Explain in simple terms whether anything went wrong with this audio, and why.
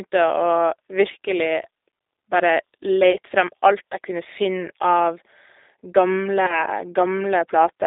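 Two things went wrong. The whole recording passed through the G.729 codec, a phone-call compressor. It rebuilds speech from a simplified model of the voice and drops everything outside roughly 300 Hz to 3.7 kHz. The speech sounds muffled, slightly rough and a little robotic throughout.

There are also two brief glitches from VoIP packet loss concealed by the speech codec. One is at 3.12 to 3.17 s, and the other is at 6.46 to 6.64 s. Each comes from about 20 ms of lost audio, which fits a single lost packet. The decoder filled the gap by guessing from the preceding sound, stretching it into a short fading sound. After the second gap the voice takes a moment to recover.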